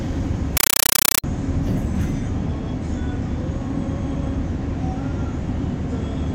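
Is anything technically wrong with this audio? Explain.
Yes. Compressed stream played as audio, 0.57 to 1.24 s: an undecoded AC-3 bitstream is played as samples, giving loud chattering static of 8 ms bursts repeating 31.25 times a second.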